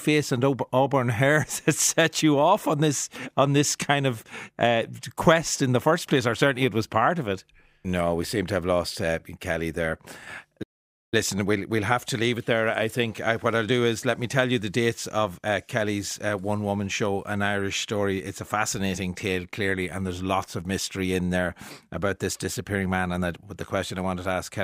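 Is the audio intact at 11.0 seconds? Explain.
No. At 11.0 seconds the speech sits inside a playback stall running from 10.62 to 11.14 s. The player was likely starved of data or had its output thread blocked, so nothing reached the output for roughly half a second (about 0.49 s). You hear the speech cut off abruptly in mid-flow, a stretch of dead silence, and then the sound resuming once the player recovers.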